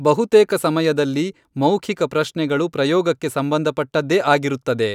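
No technical faults are audible.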